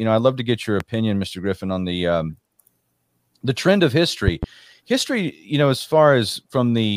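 Speech with two loud pops. One sharp pop at 0.80 to 0.84 s, after "love to get your". A double pop at 4.28 to 4.46 s, after "the trend of", well above the speech. A plug, switch or static discharge is the likely cause.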